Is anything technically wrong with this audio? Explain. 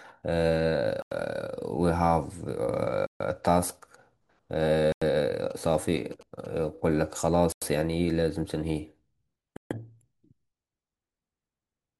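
Yes, the speech has two kinds of fault.

Block of digital silence at 1.02–1.12 s, 3.07–3.20 s, 4.92–5.02 s, 7.52–7.62 s and 9.57–9.71 s. Output buffers went unfilled and were zeroed. The 93 ms gaps fit a 4096-sample buffer, and the others last 139 ms. Each is a short hole with hard edges, unlike a smooth fade or mute.

GSM signalling bursts from 5.51 to 6.47 s, about 25 dB below the speech. A nearby 2G phone's radio bursts were rectified by the audio circuit. The result is a galloping dit-dit-dit of short 217 Hz buzzes, gated in clusters rather than a steady 50 or 60 Hz mains hum.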